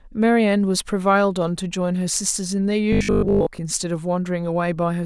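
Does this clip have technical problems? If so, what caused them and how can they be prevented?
Yes. From 2.93 to 3.61 s the speech turns into a rigid, metallic robotic sound from repeated short buffers, with a steady buzz at 50 Hz that fits a 20 ms chunk being replayed. The likely cause is audio arriving too seldom, so most of that stretch is filled by repeats while real audio is skipped. Unlike codec warbling, the buzz follows the original speech only roughly. Larger jitter buffers and steady delivery prevent it.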